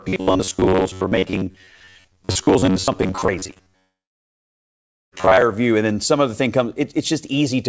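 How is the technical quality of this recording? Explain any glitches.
The recording is poor: a robotic buzz covers most of the first five seconds, a brief gap sits inside it, and a long dropout follows. The audio stops at 8 kHz, which fits a wideband call codec.

The robotic sound from repeated short buffers runs from 0.01 to 5.42 s. It is a rigid, metallic drone at 93.8 Hz that still loosely tracks the speech. The likely cause is late-arriving audio. The receiver fills each wait by replaying a fragment of about 10.7 ms, and roughly half the material comes from these repeats. Because the replay length never changes, the pitch never changes either, which sets it apart from a codec's uneven warble.

The short concealed packet loss falls at 3.54 to 3.58 s. About 20 ms never arrived in time, and roughly 18 ms of that was filled by extending the preceding sound before blending back into the real audio. 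It comes across as a quick smear or wobble. Unlike the dropout, nothing goes silent.

The long network dropout runs from 3.80 to 5.13 s, about 1.32 s missing. The last sound continues briefly as a fading buzz, then about 1.2 s of silence follows. Speech resumes later with the gap's content lost, a hole far longer than concealment can hide.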